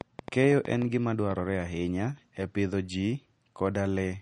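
Throughout the speech, nothing is present above 10.6 kHz, and the smeared, watery texture of a heavily squeezed MP3 sits in every syllable. This is low-bitrate audio saved at a high bitrate: the sound fits a first MP3 pass at around 40 kbit/s, likely later re-saved as a much larger MP3. The hard ceiling and the artefacts, which the second encode neither adds to nor removes, distinguish it from a single high-bitrate encode, which would keep the top octave clean.

From 0.01 s to 1.32 s, a train of clicks ticks over the audio, ending just before "ahinya e pidho ji". The clicks arrive about 6.15 times per second at an uneven pace, about ten in all, each with much the same sharp shape and standing roughly ten decibels above the speech. They continue through the gaps between sounds, which separates them from codec glitches or mouth noise and points to a likely cause in electrical interference or a struggling interface.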